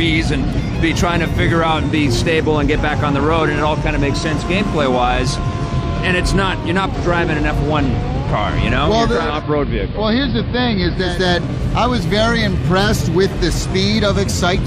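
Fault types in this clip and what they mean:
Train of clicks: regular ticking about 7 times a second from 2.96 s to the end, around as loud as the audio, likely interference or a faulty connection or supply.
Digital radio blending to analogue: between 9.07 and 11.28 s the receiver fades over 364 ms to the AM signal and back, bringing hiss well below the audio and a level drop of about 1 dB.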